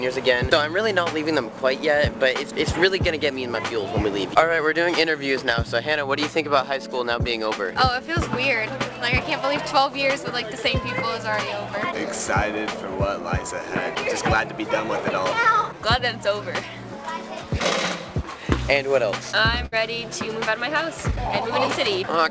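At 19.66 to 19.74 s the sound smears into a brief fading tail, then jumps ahead. This is a burst of packet loss, with about 60 ms missing.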